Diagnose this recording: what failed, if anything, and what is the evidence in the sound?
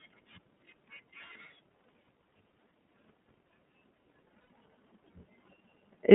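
Codec stage: the whole speech clip runs through the iLBC codec, and the damage is plainly audible. Nothing gets through above about 3.5 kHz or below 150 Hz, and the voice has that slightly rough, synthetic edge. The 30 ms frame behaviour fits the 13.33 kbps mode.

Network stage: there are lost iLBC frames at 4.49 s. About 90 ms of audio goes missing, which fits three dropped 30 ms frames. The decoder fills the gap by repeating the last pitch cycle mixed with noise, so you hear a short, buzzy held vowel. Each frame decodes on its own, so the voice snaps back right away.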